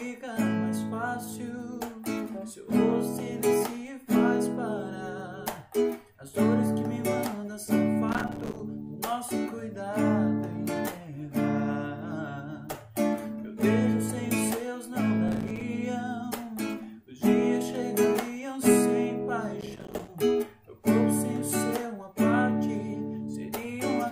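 Processor overload crackle strikes at 8.09 to 8.60 s, again at 15.28 to 15.61 s, and at 19.61 to 20.08 s. In each burst, the processor repeatedly failed to deliver its small audio buffers on time. Every miss left a brief silent gap with hard edges, and some twenty to forty of these short dropouts, consistent with buffers of around 5 ms, chain into a gritty, tearing crackle over the sound that stops once the load eases.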